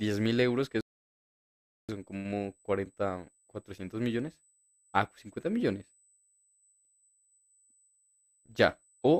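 Current drawn by a USB interface in 125-microsecond microframes leaks into the audio path through power or ground, so a USB whine sits under the speech for the whole clip: a steady, fixed tone at 8 kHz, roughly 40 dB below the speech, heard as a faint high-pitched hiss-like whistle.

At 0.81 s the player runs out of downloaded audio and halts until more arrives, producing a rebuffering stall. The speech drops to silence until 1.89 s, then picks up exactly where it stopped, with nothing missing but about 1.08 s added.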